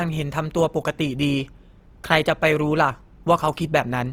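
Speech that sounds grainy and rough throughout, with tones turned noisy rather than clean, while the bandwidth reaches about 20.4 kHz. The likely cause is Opus compression in its CELT music mode at a rate around 24 kbps, filling starved bands with folded or noise content.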